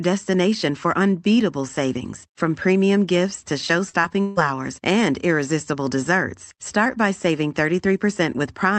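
From 3.89 to 4.39 s, repeated packet loss (robotic sound) leaves four gaps, up to 156 ms, patched with repeated sound: choppy, shown as stuttering, smeared spectrogram frames.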